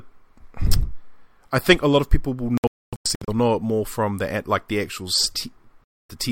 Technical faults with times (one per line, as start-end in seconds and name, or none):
2.57-3.28 digital broadcast dropout
5.84-6.10 digital broadcast dropout